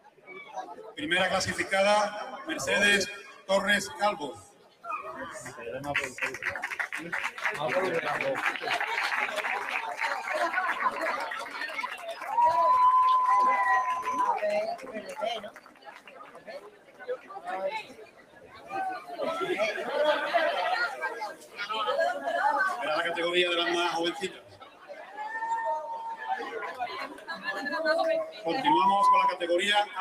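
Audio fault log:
throughout, noise suppressor applied to music or sounds: the level pumps and thins, with held parts and decaying tails sinking while attacks come through, swinging by about 15 dB. A speech-tuned suppressor left active treats steady tone and ambience as noise.
0.0–0.98 s, 3.18–5.6 s, 11.45–12.29 s, 14.76–19.18 s, 20.94–21.63 s, 24.26–28.46 s, sound cut by the noise suppressor: sustained passages sag and tails are clipped short, dropping by about 15, 15, 9, 15, 13 and 14 dB respectively. The suppressor judged these steady stretches to be noise and pulled them down.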